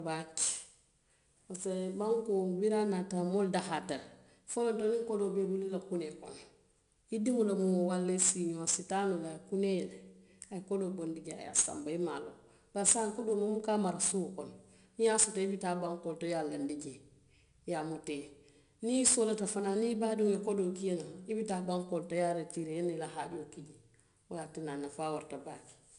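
Throughout the recording, the speech has been through 4-bit ADPCM compression, which codes each sample as a coarse adaptive step and fits a bitrate near 89 kbps. The error rides on every loud syllable as a gritty hiss, sharp onsets distort, and nothing sounds above 10.6 kHz.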